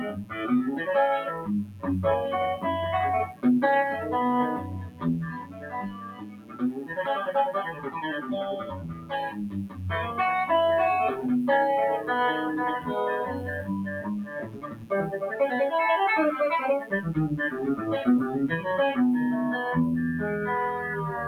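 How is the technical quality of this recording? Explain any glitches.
The recording has clear technical problems: a constant buzz and a speech-style noise suppressor that keeps swallowing the sound.

Mains buzz runs throughout. Switching spikes twice per 60 Hz cycle leak in, giving a steady raspy buzz well below the main sound.

A noise suppressor applied to music or sounds also runs throughout. It treats held, steady material as noise, so levels pump by roughly 15 dB.

Sound cut by the noise suppressor occurs at 0.06 to 0.39 s, 1.31 to 1.86 s, 3.28 to 3.44 s, 4.59 to 7.01 s, 7.71 to 9.84 s and 13.33 to 15.15 s. Sustained parts sink, by about 11 to 15 dB at worst.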